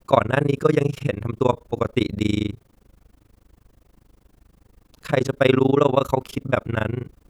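From start to end, the speech carries overlap-add ripple. The audio was split into windowed frames and rejoined with an overlap whose gains do not sum evenly, so the level dips once per frame, here around 30 times a second and by about 60 dB at each trough. The result is a harsh, fast flutter. Unlike dropouts, the dips are perfectly regular and locked to the frame rate rather than scattered.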